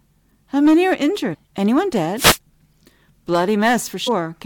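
At 1.33 to 1.35 s there's a quick blip from damaged data in the compressed stream. Bytes there were wrong, so the decoder misread those frames, lost sync and had to hunt for the next clean frame header. Then at 2.16 to 2.38 s comes a wireless microphone noise hit, a short swish of static lasting about a fifth of a second. The FM radio link faded as reflections cancelled each other out, letting receiver noise swell up over the speech. At 4.07 s there's a second, briefer damaged-data blip, another momentary decoder stumble.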